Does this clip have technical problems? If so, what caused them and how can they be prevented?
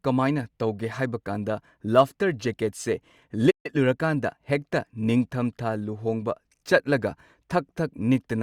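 Yes. At 3.50 s the speech cuts to silence for about 140 ms before resuming at 3.66 s. This is a playback stall: the player most likely ran short of buffered data or had its output thread blocked. A larger playback buffer and a higher-priority audio thread prevent it.

From 3.66 to 4.58 s the speech sounds hurried, about 1.15 times normal speed, at unchanged pitch. This is time-compressed catch-up: the player removes and cross-fades short slices to absorb the backlog left by the stall. Avoiding the stall removes the need for catch-up.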